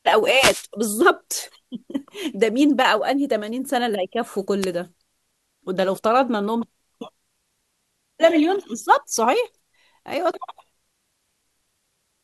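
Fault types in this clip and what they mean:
Wireless microphone noise hit: receiver noise surges as the radio signal fades, giving brief static swishes at 0.35–0.64 s and 4.61–4.66 s, unlike steady hiss.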